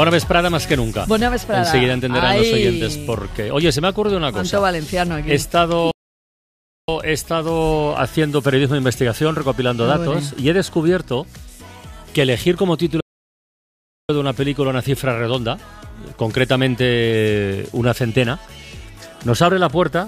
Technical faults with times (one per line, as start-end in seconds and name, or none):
5.91-6.88 playback stall
13.00-14.09 playback stall